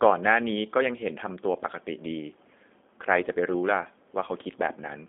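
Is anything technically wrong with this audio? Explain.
Yes, the whole clip has been through a G.729 codec. Its rough, slightly synthetic quality fits an 8 kbit/s voice codec rebuilding speech from a modelled vocal tract and sparse pulses. The band runs roughly 250 Hz to 3.6 kHz, with nothing above 3.8 kHz.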